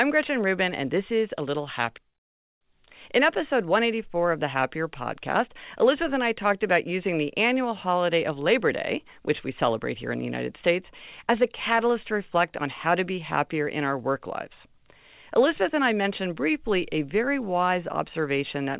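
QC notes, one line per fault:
1.98–2.12 s, skip ahead: roughly 0.4 s of speech is dropped after delayed audio had queued, so playback jumps forward, with the two sides spliced almost directly.
2.56–3.85 s, jitter buffer speed-up: the overfull buffer trims short pitch-period slices, roughly 40 ms in total, so speech runs about 3% fast at unchanged pitch until "of the".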